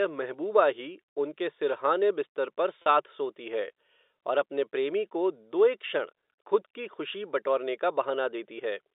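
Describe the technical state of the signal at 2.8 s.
At 2.82 to 2.86 s, just after "उनके सिरहाने बिस्तर पर", there is packet loss with pitch repetition. About 40 ms of audio went missing, which fits four 10 ms packets, and the receiver filled the hole by repeating the last pitch period. It sounds like a brief held, buzzy note. In the waveform, identical periodic cycles repeat across the gap. On the spectrogram, flat, unchanging harmonic lines sit inside the telephone band, below about 3.7 kHz.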